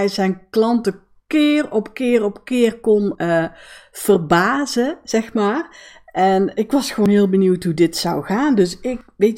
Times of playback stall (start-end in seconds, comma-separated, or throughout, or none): none